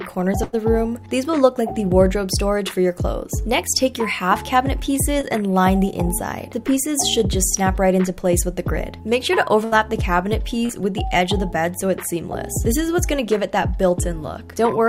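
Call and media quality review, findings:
Burst of packet loss, 0.43–0.55 s and 9.65–9.74 s: roughly 100 ms and 80 ms dropped in transport; receiver extends the last sound, fading it, then audio resumes with that stretch skipped.

Short concealed packet loss, 5.21–5.25 s and 10.66–10.71 s: about 20 ms and 40 ms late at the decoder, patched from the preceding sound and blended back, heard as a brief smear or wobble.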